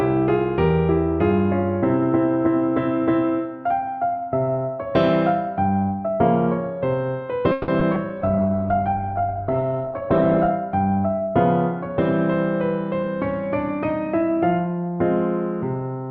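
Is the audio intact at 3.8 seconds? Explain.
Yes, the audio is intact at 3.8 seconds, with no dropout, click, distortion or other fault at that point.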